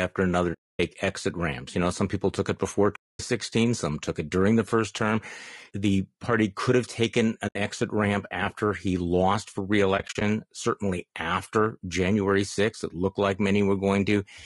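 Speech that sounds rough and grainy throughout, with noise filling the gaps between harmonics, most likely from low-delay AAC compression (AAC-ELD at around 32 kbps), unlike broadband hiss, which would sit evenly across the spectrum. Four AAC frame losses with muting leave soft-edged silent holes that fade out and back in, unlike a hard dropout: 0.53–0.80 s before "exit ramps", 2.95–3.20 s between "people took it before" and "some took it during", 7.47–7.56 s between "party could have taken" and "exit ramp after he", and a scattered cluster of short gaps, none longer than about 40 ms, across 9.97–10.22 s.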